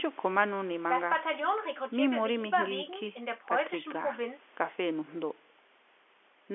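The speech carries the narrow sound of a working G.711 telephone line, held to about 300 Hz to 3.4 kHz with the lowest bass trimmed by the call's microphone processing, and nothing in it departs from what such a connection normally delivers.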